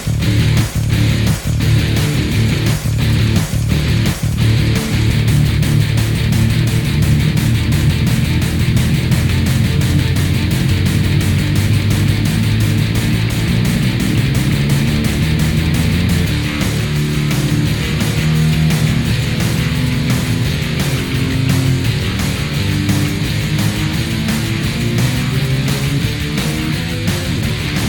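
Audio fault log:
No technical faults can be heard anywhere in the signal.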